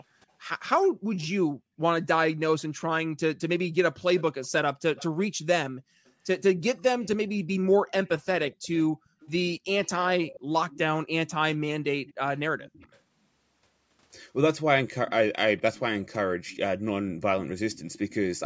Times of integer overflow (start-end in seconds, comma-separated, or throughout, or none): none